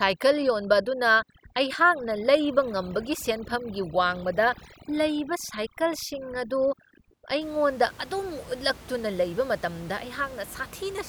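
Speech with overdone noise removal from the start to 7.41 s: the noise reduction is set so hard that individual frequency bands near the noise estimate are pulled almost to nothing, taking quiet parts of the voice along with them. The gaps drop and break up into twinkling specks. On a spectrogram the background shows as scattered isolated dots on a dark field, with holes in the speech's weaker harmonics. After 7.41 s the room noise sits about 20 dB below the speech.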